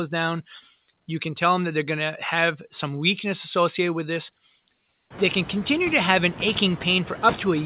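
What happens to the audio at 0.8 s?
Noise suppressor artifacts are present at 0.8 s and throughout: bands judged as steady noise are pulled down about 16 dB frame by frame, so the background dips between words and swells beneath speech.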